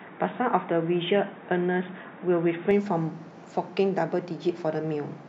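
Until 2.71 s, the input had likely switched to a poorer device passing nothing above 3.8 kHz. The speech sounds dull and boxy, then clears abruptly without a gap.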